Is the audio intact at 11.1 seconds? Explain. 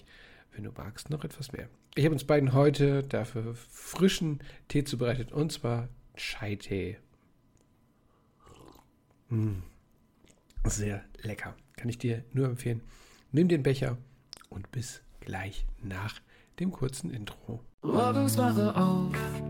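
Yes, at 11.1 seconds the audio plays through cleanly, with no dropout, click, distortion or other fault at that moment.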